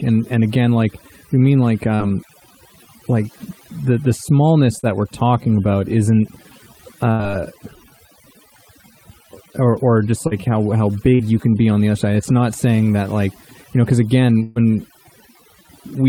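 Across the whole recording the background is pushed to near silence apart from small twinkling specks. This is overdone noise removal: frequency bands near the estimated noise level were cut far down or off, taking quieter parts of the speech with them.

Brief smears or wobbles come at 4.79, 10.27 and 11.15 s, each around 40 ms, and short sounds can drop out there. These are short concealed packet loss, where the receiver bridged a missing stretch by extending the last sound and then blended back.

At 7.11 s a held buzz or fading hiss lasts about 80 ms, and at 14.43 s a longer one of about 130 ms follows. After each, the audio resumes further on with that stretch gone. This is a burst of packet loss, concealed by continuing the last sound and fading it.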